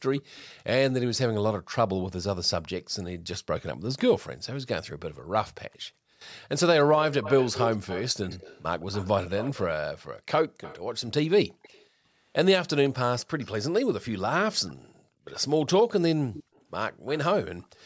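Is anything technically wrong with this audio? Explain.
Yes, this speech has two faults. Echo leak: a faint copy of the speech trails it by 166 ms, likely the far end's echo canceller passing loudspeaker sound back into its microphone. It occurs at 0.17 to 0.43 s, 7.11 to 11.86 s, 12.87 to 13.47 s and 14.68 to 17.67 s, roughly 15 to 25 dB below the speech. On a spectrogram it appears as faint, time-shifted duplicates of the speech harmonics. Background gated by the echo canceller: the canceller clamps the microphone while its loudspeaker plays, so room sound briefly vanishes. This happens at 1.61 to 1.71 s, 11.6 to 12.05 s and 14.89 to 15.25 s, dipping by about 40, 25 and 36 dB respectively. The waveform shows abrupt near-flat gaps in the noise floor.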